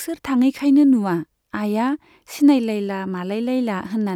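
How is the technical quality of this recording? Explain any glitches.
No glitches to point to here; the recording just runs along without any technical hiccups worth mentioning.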